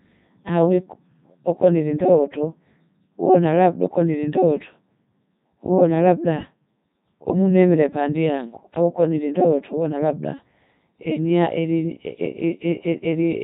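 From start to finish the speech carries the signature of the Codec 2 vocoder, with heavy damage. The voice is rebuilt at the decoder from a set of sine waves driven only by pitch, voicing, energy and a coarse spectral envelope, so the original waveform never arrives. The result is a robotic, buzzy tone, and the detail present points to Codec 2's highest mode, around 3.2 kbit/s.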